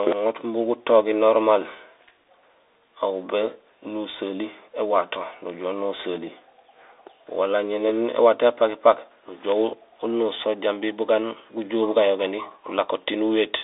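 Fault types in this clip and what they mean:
Bluetooth CVSD headset codec: The speech has passed through the narrowband codec used by Bluetooth headsets. It codes each sample as a single up-or-down bit, which fits a 64 kbps stream, and the step size adapts as it goes. The line band runs only from about 300 Hz to 3.7 kHz. The damage is plainly audible: loud, bright sounds outrun the step and distort, s sounds turn scratchy, and a granular hiss sits beneath the speech.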